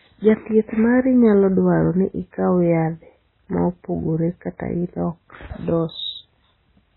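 Throughout, heavy MP3 compression: nothing above 4 kHz, watery swirling where weak bands flicker frame to frame, and smeared onsets, likely from a very low bitrate.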